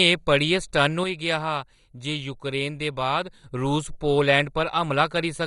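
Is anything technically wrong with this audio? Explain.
Yes, two problems are audible.

Throughout the speech, the sound is dull and carries a gurgling, granular texture, with nothing above about 11.2 kHz and the remaining upper detail shimmering in and out. This is likely heavy MP2 compression. MPEG Layer II divides the spectrum into 32 sub-bands and shares out a fixed bit budget, so at a rate consistent with roughly 56 kbps the top bands are switched off entirely and those that survive are coarsely quantised. The bands flicker on and off, producing that granular smear.

From 1.04 s to 3.44 s, the sound abruptly drops by about 6 dB, then returns to its previous level. The likely cause is one channel dropping out: when one side of a stereo pair disappears and the signal is folded to mono, material shared by both channels loses half its contribution, giving the 6 dB fall. Anything present only in the missing channel vanishes for that stretch.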